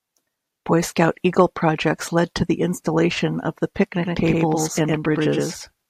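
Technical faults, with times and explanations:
4.02 s to end, doubled audio track: after "the installation of the", an equal-level copy lags about 100 ms, likely via a second capture path; waveform bursts appear twice.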